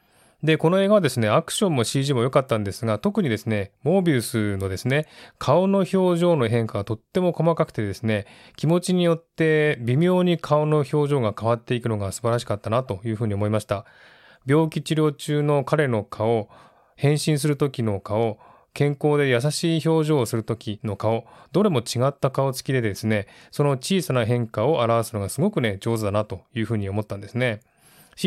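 Nothing in this speech recording points to a technical fault; the signal holds steady throughout, with no audible interruption, distortion or level problem at any point.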